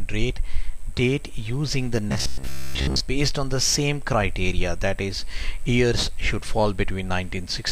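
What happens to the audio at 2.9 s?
Robotic sound from repeated short buffers runs from 2.09 to 3.01 s. A roughly 15 ms chunk likely replays in place of most new audio, producing a rigid, metallic 67 Hz buzz. This shows as identical repeating cycles in the waveform and evenly spaced harmonic lines on a spectrogram.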